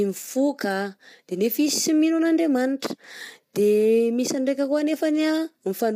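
The speech is plainly rough and grainy throughout, likely from low-delay AAC compression, whose short frames blur harmonics; the damage fits a bitrate near 32 kbps.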